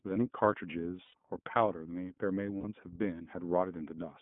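The speech runs through the iLBC codec throughout. It is band-limited to roughly 150 Hz to 3.4 kHz and sounds rough and slightly synthetic, which fits the 13.33 kbps mode.

Lost iLBC frames follow at 1.05 to 1.14 s, about 90 ms, and at 2.58 to 2.65 s, about 60 ms. The decoder repeats the last pitch cycle, so each gap is a brief buzzy held vowel. The voice is right again almost at once.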